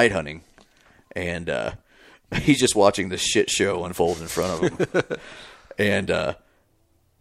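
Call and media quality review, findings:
Call and media quality review findings: no faults found in this speech clip.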